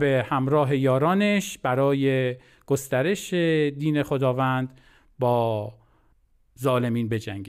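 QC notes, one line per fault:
No faults found on the speech, so nothing to log.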